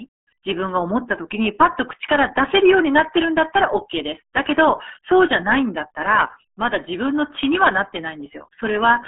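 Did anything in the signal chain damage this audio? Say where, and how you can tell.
Yes, at the codec stage. For the whole clip the speech is muffled and gargly, with nothing above about 3.8 kHz. This points to heavy RealAudio 14.4 codec damage, which fits an 8 kbit/s dial-up coder whose narrow band and coarse modelling smear consonants and vowels.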